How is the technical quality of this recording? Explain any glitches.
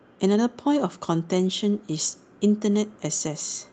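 The speech came through an Opus call path whose audio stops at about 8 kHz. It has two brief glitches where a lost packet was rebuilt from error correction.

From 1.49 to 1.51 s and from 2.73 to 2.75 s, a single 20 ms packet went missing. The decoder rebuilt each one from the low-bitrate backup copy carried in the following packet, so there's no dropout, just a momentary rougher, noisier patch in the speech.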